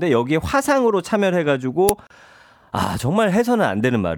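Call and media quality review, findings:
Uninitialised buffer at 1.89 s: loud crack cutting into the speech, about 5 ms long. Playback likely grabbed a block before anything was written to it, so leftover memory came out as samples. Check buffer handoff/fill ordering.

Gap at a join of encoded pieces, 2.07 to 2.10 s: roughly 35 ms hole in continuous speech, smeared edges, then picks up where it left off. Separately encoded segments stitched without trimming encoder delay and end padding. Look at the segmenter/concatenation step.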